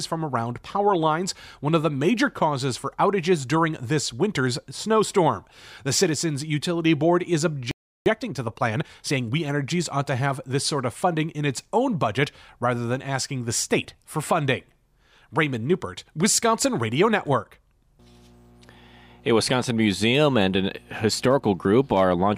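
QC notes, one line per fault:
7.71 to 8.06 s, playback stall: the audio halts mid-flow and stays silent for about 0.35 s. The likely cause is the player running out of data or being blocked. Unlike a mute, no fade precedes it.
8.06 to 9.44 s, time-compressed catch-up: right after the stall, the audio runs hurried at about 1.25 times normal speed, as small pieces are cut out and cross-faded to clear the backlog. Pitch stays unchanged, which separates it from a sped-up resampling fault.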